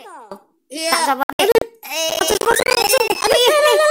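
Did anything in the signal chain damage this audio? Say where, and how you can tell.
Yes. At 0.32 s the level jumps by about 24 dB in a single step and stays there to the end of the clip. The background noise rises with the sound, so the change is in the digital gain, not the source. There is no ramp, only an instantaneous step. This is a sudden gain jump, likely from a gain setting or bit shift applied at the driver or processing stage without smoothing.

From 1.23 s to 1.62 s the sound breaks into several short holes of silence scattered across roughly 384 ms. About 192 ms is lost in total, and the longest single hole is about 64 ms. The gaps are clean mutes, and the material in them is gone rather than delayed. This is a digital broadcast dropout. The receiver muted on bad or missing frames, and the hole sizes fit frames of about 32 ms.

Between 2.10 s and 3.34 s a gritty crackle rides on the sound. 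It is made of many tiny hard-edged gaps of silence, dozens of them, each around 10 ms long, which fits a buffer of roughly that size. The crackle stops once that stretch ends. This is processor overload crackle at the driver or buffer stage. The processor repeatedly missed its buffer deadlines, and each missed buffer was output as silence.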